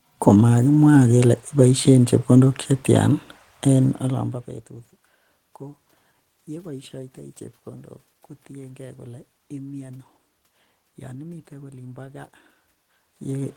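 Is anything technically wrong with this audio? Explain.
No, nothing here is a technical fault in the audio.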